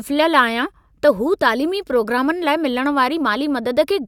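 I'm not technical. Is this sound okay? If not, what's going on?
Yes, this sound is okay, and there's nothing going on with it that needs fixing.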